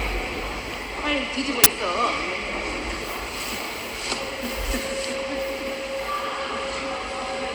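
At 1.64 to 1.66 s, a brief, harsh blast of digital noise cuts through the audio. This is an uninitialised buffer: a block was sent to playback before any audio had been written into it, so leftover memory played out as samples. The roughly 23 ms length fits a 1024-sample buffer.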